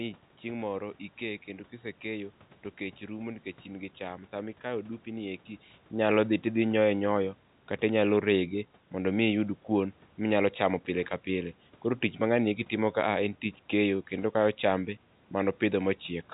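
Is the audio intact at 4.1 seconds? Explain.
Yes, the audio is intact at 4.1 seconds, with no fault at that moment.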